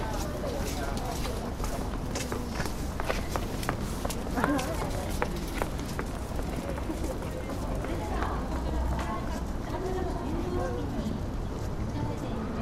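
No technical faults can be heard anywhere in the audio.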